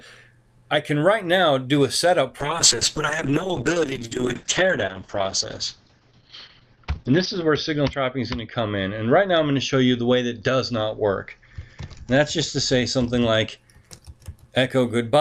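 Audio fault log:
2.4–13.63 s, call bitrate drop: the call's bandwidth estimate fell and the encoder was told to spend far fewer bits, with the sound pointing to a fall from around 48 kbps to roughly 8 kbps, held at its lowest for about 5 s. Coding grows coarser, so the sound turns rough or watery, and the upper band is cut from 20 kHz to 6 kHz, leaving it muffled. Quality returns by 13.63 s as the bitrate recovers.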